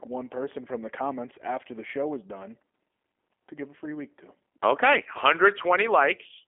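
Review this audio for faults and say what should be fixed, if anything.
G.729 codec damage runs through the whole clip. The speech is rebuilt from a vocal tract filter, a pitch predictor and a handful of pulses per frame, which gives the plainly audible rough, synthetic edge. The sound fits an 8 kbit/s G.729A stream on a telephone line passing 250 Hz to 3.4 kHz. On a spectrogram, energy stops abruptly at about 3.5 kHz and little shows below 250 Hz, and the waveform looks smoothed. To prevent this, record or route the call over a wideband codec at a higher bitrate.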